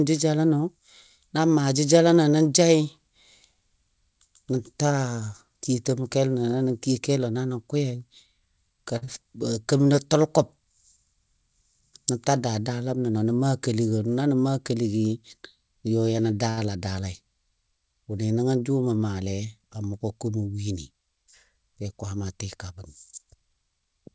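At 8.98 to 9.03 s there's a short stall from a late packet. The jitter buffer ran dry, so the receiver held the last sound for 34 ms until the packet turned up, then carried on from the same spot. Nothing's lost, just a slightly drawn-out moment with a faint buzz or dip. The same thing happens again at 16.50 to 16.59 s, a longer 72 ms hold.

Right after the first stall, at 9.05 to 9.09 s, there's a short concealed packet loss. About 20 ms of audio never arrived, and the decoder papered over it by extending what came before, then blended back in. You hear it as a tiny smear or wobble.

There are two jitter buffer speed-ups. At 13.09 to 13.31 s the buffer had too much audio queued, so the receiver trimmed pitch-period-sized slices, around 40 ms in all. Playback runs at 113% speed with no pitch change and sounds briefly hurried. At 22.89 to 23.87 s a gentler 106% pass removes roughly 70 ms.

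All of this sits on a G.722 call path at 64 kbps with nothing above 8 kHz.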